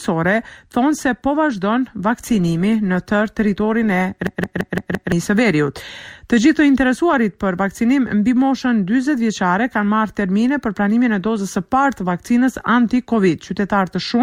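From 2.09 to 4.09 s the connection slowed and the player dropped to an adaptive stream at a lower bitrate. The switch is abrupt and leaves no gap. Codec artefacts rise for those two seconds. The change in character fits a step down from roughly 64 to 24 kbit/s Opus. Fuller quality returns just as suddenly at 4.09 s.

At 4.27 s a system hang loop begins. The computer or driver stalled while the audio hardware kept replaying its ring buffer. A single 170.67 ms fragment repeats exactly, about five times, which fits an 8192-sample buffer. It cycles at 5.86 Hz and is heard as a rapid machine-gun stutter rather than a steady buzz. It ends at 5.12 s, and roughly a second of the real audio is lost.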